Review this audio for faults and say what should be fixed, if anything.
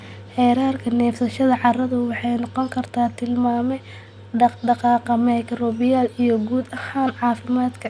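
Nothing needs fixing; no faults are audible in this speech.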